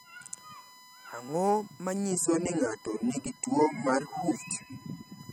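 A steady 1 kHz tone sits under the speech from start to finish, roughly 25 dB below it. That's USB whine: the bus's 1 ms frame timing leaks current into the power or ground line, so it rings as a fixed, thin pitch behind everything.

At 2.12 s the quality suddenly drops, with no gap, and stays down to the end at 5.33 s. It's an adaptive stream switching to a lower bitrate. The top end thins out, nothing comes through above 15.9 kHz, and codec smearing creeps in, which fits a fall from around 96 to 24 kbit/s AAC.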